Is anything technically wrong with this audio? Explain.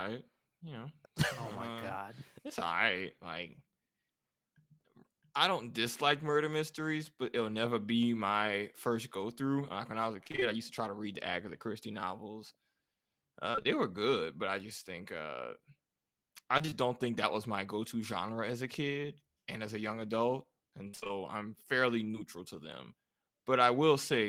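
Yes. Repeated packet loss (robotic sound) occurs four times: 10.23 to 10.43 s (after "when I was a", before "I used to try"), 13.51 to 13.66 s, 16.58 to 16.73 s (before "don't think that was") and 20.87 to 21.11 s. In each stretch, four or five packets went missing in quick succession, and the receiver filled every hole by extending the preceding sound. About half of each span, 58% in the last one, is this patched material, so the speech turns choppy and robotic with pieces missing.

Short concealed packet loss occurs at 22.11 s, between "I'm fairly" and "to them". About 20 ms of audio failed to arrive, and the gap was bridged by continuing the last sound before blending back, leaving a brief smear.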